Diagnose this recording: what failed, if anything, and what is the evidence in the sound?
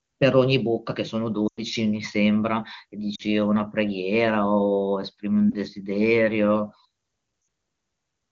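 Network stage: radio errors corrupted AMR-WB speech frames so they failed their checksum, and the decoder had to conceal the gaps by repeating its last good pitch and vocal tract parameters at falling gain. The lost AMR speech frames show up at 1.47 to 1.62 s, 3.15 to 3.23 s, 5.50 to 5.55 s and 7.41 to 7.47 s. The longest gap, about 100 ms, fits five 20 ms frames; there the speech drops to near silence within two frames before recovering roughly. The shortest gap is a brief dip or warble against the clear wideband coding around it.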